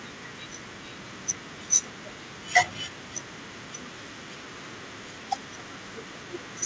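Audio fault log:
The speech comes through a wideband call path whose content stops at 8 kHz, consistent with a G.722-type codec, and nothing in the signal departs from what that path normally produces.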